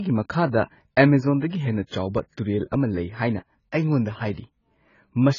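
AAC compression damage runs throughout: the speech sounds dull, smeared and warbly, with nothing above 7 kHz, likely from AAC-LC at roughly 16 kbps.

Pre-echo at 4.33 to 4.37 s: a 48 ms hiss precedes an attack, as coding noise spread over the block fills the quiet before it.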